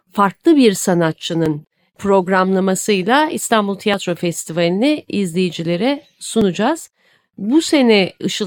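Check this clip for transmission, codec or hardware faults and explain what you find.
One fault type recurs: audio missing between chunks, at 1.46, 3.94 and 6.41 s. The speech skips abruptly at a steady 2.5 s spacing, likely because each chunk boundary drops roughly 20 ms and then joins the two sides directly.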